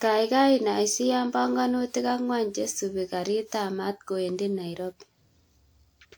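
The speech has most likely been through repeated lossy encoding, decoded and re-encoded about five times with a codec whose character fits WMA at 128 kbit/s. That is generation loss. Each pass quantises on a shifted frame grid, so errors accumulate from start to finish. Although content reaches about 20.1 kHz, the sound is swirly, smeared and hollow in a way that bitrate alone would not explain, and consonant attacks lose their edge.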